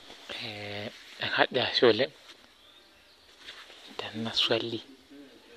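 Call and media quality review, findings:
DAB burbling, 0.44–0.48 s and 3.00 s: weak reception letting residual bit errors past error correction into MP2 data, corrupting samples. Short blips of noise in individual sub-bands over the speech.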